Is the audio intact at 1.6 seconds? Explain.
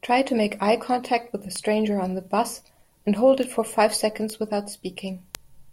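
No, not quite. Right around 1.56 s there's a bit error spike: a single sample where one flipped bit throws the value off by a power of two, peaking near about -5 dBFS before snapping back. You hear it as one sharp, broadband tick unrelated to the speech.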